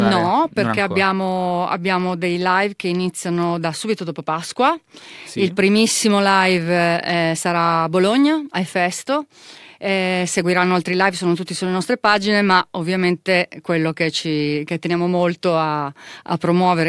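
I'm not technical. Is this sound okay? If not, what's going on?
Yes, the sound is technically fine, with nothing going wrong in the signal at any point.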